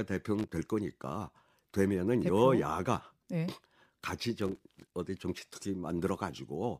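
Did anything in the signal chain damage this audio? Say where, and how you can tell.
Yes. Loose connector crackle appears in the analogue wiring, in two bursts, from 0.39 to 0.53 s and from 4.42 to 4.94 s, the second lasting about half a second. Each burst is an irregular scratchy crackle laid over the speech. A worn or dirty contact somewhere in the cable or jack is making and breaking as it shifts, chopping the signal on and off.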